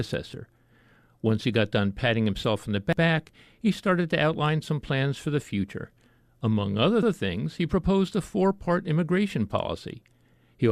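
At 2.93 s, overlapping chunks cause a stutter: the next 4 s chunk begins before the previous one finishes, so 100 ms of audio plays twice at the join. Unlike a dropout, nothing goes missing; the same material repeats, and the stutter recurs at 7.03 s, roughly one chunk later. At 3.18 s, a corrupt frame decoded produces a brief blip, with error peaking around -30 dBFS, lasting a couple of frames. Damaged bits put energy at the wrong frequencies, so this is new, foreign sound rather than a repeat of real audio.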